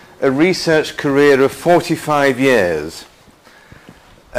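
From 0.84 s through to the end, a gritty, inharmonic fizz rides on the sound, tracking its louder and brighter moments and sitting roughly 30 dB below it. This is crude rate conversion: samples were simply repeated or skipped to change the rate, with no interpolation or anti-aliasing filter. The fizz fits a step from 44.1 kHz to 48 kHz, with the duplicated samples falling in a regular pattern that creates spurious tones.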